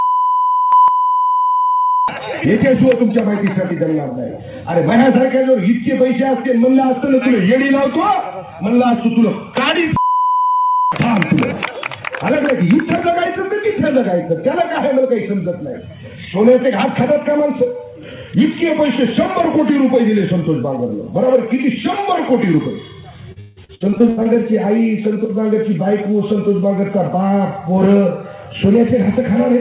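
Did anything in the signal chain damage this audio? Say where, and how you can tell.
Yes. Between 23.32 and 24.27 s there is a burst of repeated packet loss (robotic sound) at the network and jitter-buffer stage. Nine gaps fall in under a second, the longest 164 ms, with roughly half the stretch concealed. Each hole is papered over by extending the previous frame, so the sound turns choppy with pieces missing. The narrow band with nothing above 4 kHz fits a G.711 call path at 64 kbps.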